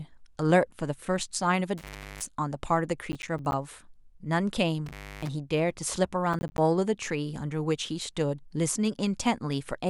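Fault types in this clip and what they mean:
Intermittent contact: a loose plug or cable briefly opening, so the speech drops out with crackly edges, about 0.37 s near 1.8 s and 0.3 s near 4.9 s.
Processor overload crackle: the processor misses buffer deadlines, leaving short silent gaps that pile into gritty crackle, around 3.1–3.5 s and 6.3–6.6 s, roughly 10 ms chunks.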